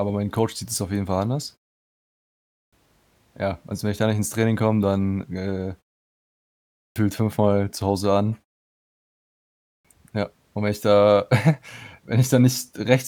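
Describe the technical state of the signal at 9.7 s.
At 9.7 s the signal lies inside a clipped start after a pause, spanning 9.28 to 9.85 s. After a 0.92 s silence the output device was still waking, so 0.57 s of speech is swallowed and the word begins abruptly, without its opening sounds.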